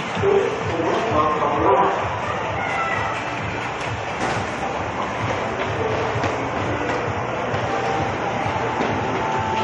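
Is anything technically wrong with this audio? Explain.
Yes, there's one glitch. At 4.80 to 4.82 s there's damaged data in the compressed stream. Corrupted data made the decoder misread that stretch, lose sync and hunt for the next good frame header, so you hear a brief glitch.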